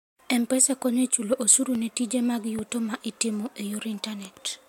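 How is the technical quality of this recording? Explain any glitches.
The recording has two loud pops on top of the speech.

The first runs from 1.75 to 1.78 s, between "chulo osuru" and "ne tije mag". The second runs from 2.59 to 2.61 s, between "osuru ne tije mag" and "ma itimo e". Each is a single sharp pop, a few decibels louder than the speech. The likely cause is a brief electrical spike, such as a switch, static or a driver glitch, entering the signal path. The following circuitry rounds it into a short thump. The speech continues underneath.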